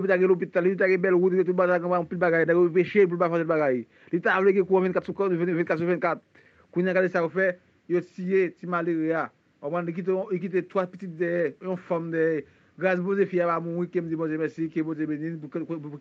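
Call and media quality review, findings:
Bluetooth SBC bit pool drop, 4.98–6.76 s and 10.42–11.80 s: dull treble, gritty noise. Spectrogram shows upper bands thinning and going ragged, which fits a bit pool falling from 28 to 13.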